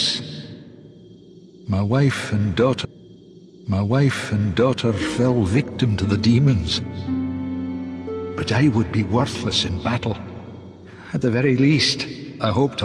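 At 2.84 s the audio jumps back with a small blip and plays about two seconds again, the repeat running until 4.83 s. This is a stream segment repeated: the player fetched or queued the same chunk twice, adding roughly 2.0 s of duplicated programme.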